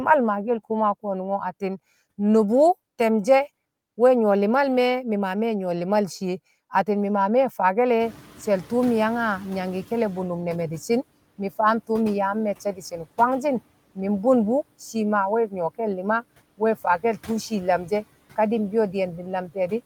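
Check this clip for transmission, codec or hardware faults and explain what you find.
Two processing faults are audible, both from the noise suppressor. No transmission or hardware problems stand out.

From 8.00 to 10.27 s the noise suppressor is catching up. The room noise jumps by about 21 dB at around 8 s. The suppressor's noise estimate trails this rise. The noise therefore comes through with less reduction at first. Over about 2.27 s it sinks by about 10 dB as the estimate adapts.

Speech is cut by the noise suppressor at 12.65 to 12.99 s and at 16.58 to 17.29 s. The suppressor mistakes parts of the speech for noise and turns them down, by up to about 13 dB and about 15 dB. Only brief stretches are affected, around 150 ms and 100 ms. They sound swallowed and faint.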